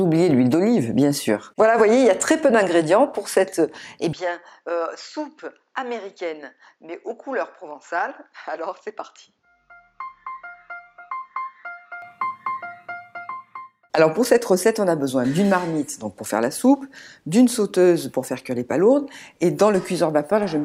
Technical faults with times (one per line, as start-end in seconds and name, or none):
4.13-12.02 input switched to a poorer device